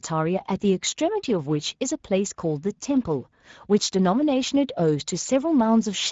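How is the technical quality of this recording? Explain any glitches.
The recording is clearly degraded by a single fault present for its whole length.

Speex codec, throughout: the CELP coder has too few bits for the excitation, so speech sounds noisy and hoarse, with nothing above 7.7 kHz, which fits a bitrate near 16.8 kbps.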